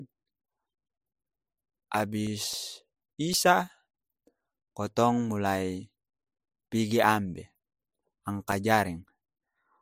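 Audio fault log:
2.00–4.40 s, CD scratch ticks: a regular train of about ten brief clicks, roughly four per second, each only a few milliseconds long. A scratch spoils more data than error correction can rebuild on each disc revolution, so the player briefly mutes or interpolates.
7.72–9.06 s, CD scratch ticks: six more short ticks at a similar once-per-revolution rate, each around a few milliseconds or less. The periodic spacing points to a single surface blemish passing the laser each turn, leaving tiny patched gaps in the speech.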